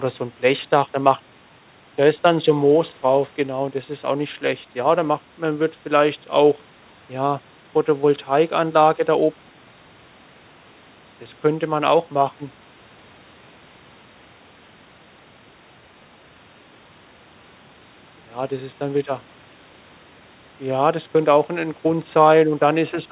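Nothing is technically wrong with this speech clip, which carries the expected narrowband sound of a G.711 call path with nothing above 4 kHz.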